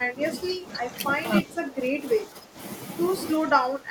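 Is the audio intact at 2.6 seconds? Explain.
No. The echo canceller likely mistook double talk for echo and turned the speech down, so from 2.22 to 2.58 s it dips by about 10 dB: speech suppressed in double talk.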